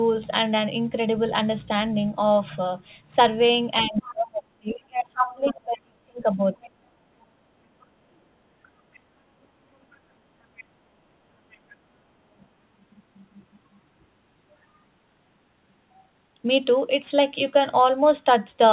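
At 3.83 to 4.12 s a second voice leaks in faintly, well below the talker, and from 3.86 to 6.71 s the talker's speech is suppressed in double talk: the level dips repeatedly, by as much as about 30 dB, for roughly three seconds in total. Both sides were speaking at once, and the echo canceller, likely unable to separate its own talker from the loudspeaker echo, pulled the whole signal down, so the near voice thins out and drops away in pieces.

Within that stretch, from 4.72 to 5.54 s, the other side's voice leaks through at nearly the same level as the speech. This is the most obvious instance. The far talker's audio, likely played on the device's loudspeaker and picked up again by its microphone, was probably not fully removed. Shorter, much quieter scraps of the same leakage follow at 7.22 to 7.26 s, 8.63 to 9.0 s, 9.92 to 9.97 s, 10.56 to 10.64 s and 11.51 to 11.57 s. These sit roughly 25 to 40 dB down and come through as brief faint fragments.

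The whole clip is band-limited with nothing above 4 kHz. That points to a narrowband call codec such as G.711 mu-law at 64 kbps on the call path.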